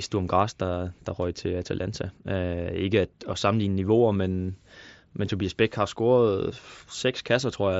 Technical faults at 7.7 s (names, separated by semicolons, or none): none